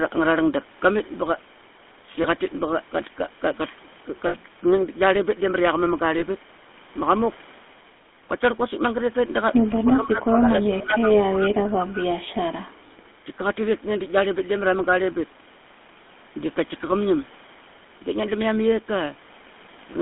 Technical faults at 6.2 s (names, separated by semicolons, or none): GSM full-rate codec; lost GSM frames